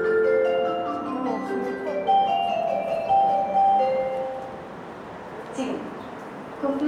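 No technical fault can be heard anywhere in this recording of sounds. Nothing in it points to a problem in the chain that captured or carried the audio.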